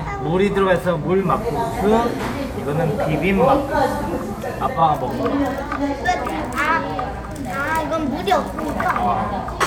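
At 1.12 s the receiver loses its digital stream and a digital radio blend to analogue takes over, cross-fading in 181 ms to the FM broadcast until it blends back at 4.85 s. In that stretch a hiss floor rises to around 30 dB below the sound, and the level shifts by about 2 dB. A spectrogram shows a grey noise haze filling the gaps, and the waveform steps slightly in height at each blend.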